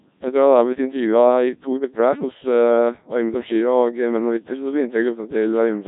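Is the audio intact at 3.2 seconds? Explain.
No, at 3.2 seconds you're hearing the Codec 2 vocoder that runs through the whole clip: buzzy, robotic speech rebuilt from sine waves, nothing above 3.8 kHz, consistent with roughly 1.3 kbit/s.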